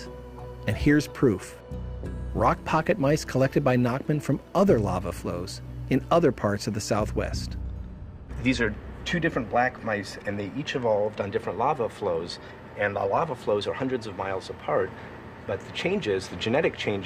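Nothing stood out as a technical problem on listening to the recording.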